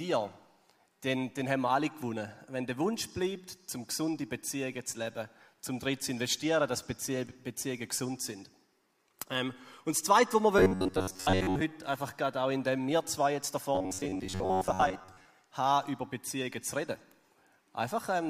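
Robotic sound from repeated short buffers at 10.59 to 11.61 s and 13.75 to 15.25 s. Each time, a rigid metallic buzz near 94 Hz follows the original only roughly. This is likely from audio arriving too seldom, with a roughly 11 ms fragment looped over most of the audio.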